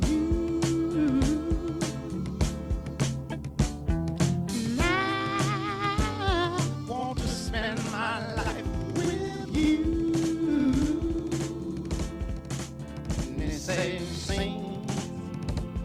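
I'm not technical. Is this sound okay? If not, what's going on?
No. From about 6.93 s to the end, one channel runs about 85 ms late, likely from a large holding buffer, and the two channels are mixed together. This is called channel delay (doubling): everything sounds doubled, like a quick slap echo at equal loudness.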